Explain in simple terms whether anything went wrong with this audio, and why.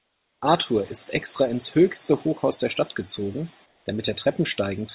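At the very start, up to 0.42 s, and again from 3.66 to 3.86 s, the real background drops out for a flat, quieter hiss: comfort noise in place of the background, likely from the call pausing transmission in silence.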